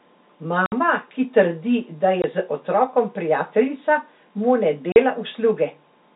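Telephone-band speech, cut off above 4 kHz by G.711 coding, has three holes from packet loss filled with silence at 0.66–0.72 s, 2.22–2.24 s and 4.92–4.96 s. The 60, 20 and 40 ms gaps, consistent with 20 ms packets, start and stop abruptly.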